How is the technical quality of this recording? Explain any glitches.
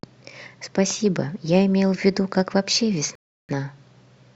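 The recording has one glitch, a rebuffering stall, from 3.15 s to 3.49 s. The player's downloaded audio ran dry, so playback halted until more data arrived. The speech drops into silence for 336 ms, then picks up exactly where it stopped, losing nothing but running that much longer.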